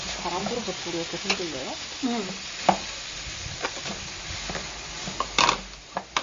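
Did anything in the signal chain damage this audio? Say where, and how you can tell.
Yes, at the codec stage. Nothing remains above 7.2 kHz for the whole clip, and weak detail swirls. This is likely MP3 compression, consistent with roughly 32 kbps.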